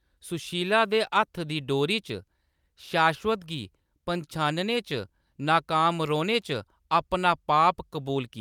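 Nothing technically wrong turns up anywhere in this bit of speech, so there's no fault to point to and no time worth flagging.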